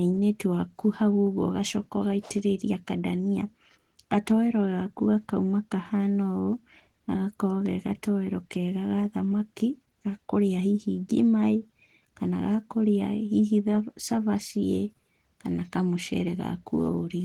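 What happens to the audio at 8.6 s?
At 8.6 s the speech carries Opus voice compression, as it does through the whole clip. The codec is running in hybrid mode. A linear-prediction coder handles the band below 8 kHz, and a transform layer adds the upper range, which reaches about 20 kHz. The damage is plainly audible. The voice sounds hoarse and slightly robotic, because the excitation is coded coarsely in 20 ms frames. That fits a bitrate around 16 kbps.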